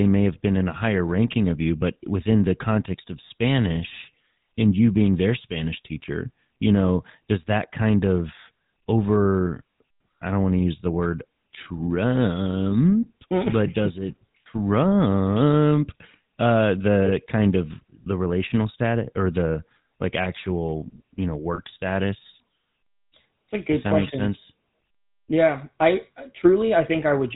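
The whole recording passes through the GSM full-rate codec. This early mobile codec models the vocal tract and drives it with a sparse pulse train. Only every third excitation sample is kept. Nothing above 4 kHz survives, so the top end sounds dull. The damage is plainly audible as a buzzy, gravelly roughness on the voice. The texture fits the 13 kbps full-rate coder.

At 17.06 to 17.11 s comes the first burst of lost GSM frames. The decoder repeats the settings of the last good frame. A short rough, metallic ring replaces the real sound. That fits a single lost 20 ms frame. At 21.54 to 21.60 s it happens again, slightly longer. The held ring lasts longer this time, which fits two frames, about 40 ms.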